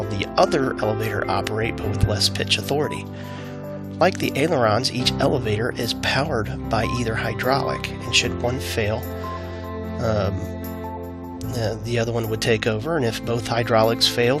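From about 9.84 to 11.02 s there's a block size mismatch (truncated): one stage hands over longer blocks than the next reads, so each block's tail gets dropped. You hear it as a buzz at about 46.9 Hz, which fits 1024-sample blocks being written.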